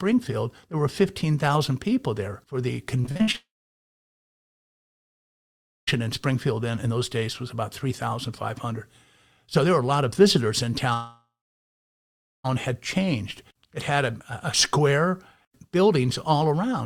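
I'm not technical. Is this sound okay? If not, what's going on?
No, the audio has problems. From 3.01 to 3.36 s there is repeated packet loss, with a robotic sound. Pieces of the audio went missing six times in quick succession. Each hole was patched by stretching the last bit of sound, so it sounds choppy and mechanical.

Right after, from 3.36 to 5.89 s, the sound cuts out and stays silent for about 2.4 seconds. It happens again from 10.93 to 12.46 s, with about 1.1 seconds of silence. Each gap is a long network dropout, likely from the connection failing. Whatever was there is lost, and the audio simply resumes later.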